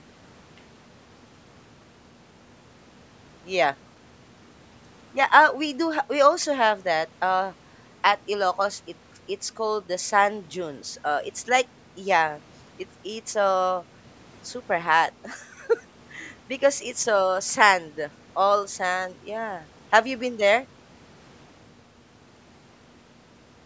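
Nothing stood out on listening to this speech recording, which carries the usual call microphone processing with no content above 8 kHz.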